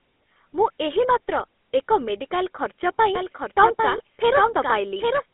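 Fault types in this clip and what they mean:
GSM full-rate codec: The speech runs through a coarse vocal-tract model driven by sparse pulses, giving a buzzy, gravelly roughness throughout. A spectrogram shows energy confined to roughly 250 Hz to 3.6 kHz, consistent with 13 kbps full-rate coding, with smeared harmonics.
Doubled audio track: From 3.15 s to the end, a second full-band copy of the speech trails roughly 0.7 s behind at about 5 dB lower, most likely from a slower second capture path. The waveform shows repeated envelopes, and the copy begins abruptly.
Lost GSM frames: At 3.98 to 4.01 s a 20 ms gap, which fits one lost frame, was filled by repeating the previous frame's settings. It sounds like a brief metallic ring. A spectrogram shows a short frozen, flat-topped patch.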